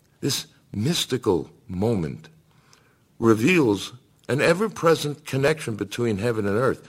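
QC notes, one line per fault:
0.24 to 6.73 s, periodic USB or driver dropouts: every 0.25 s a tiny slice of the speech, roughly half a millisecond, is skipped outright, giving regular ticks heard only under signal. On the waveform, evenly spaced discontinuities; on a spectrogram, thin broadband vertical lines at fixed spacing.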